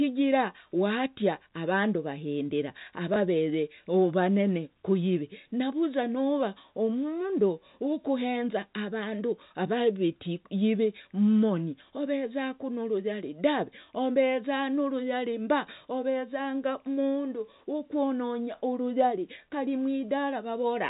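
At 3.14 s there is a single instance of packet loss with the last packet repeated. One 20 ms block of speech failed to arrive, which fits one lost packet, and the receiver covered the gap by replaying the preceding 20 ms. The result is a brief, small blip. The G.711 telephone coding around it keeps the audio band-limited to 4 kHz.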